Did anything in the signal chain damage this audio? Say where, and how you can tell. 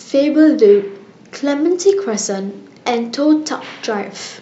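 No, nothing in the signal chain stood out as damaging this speech on listening.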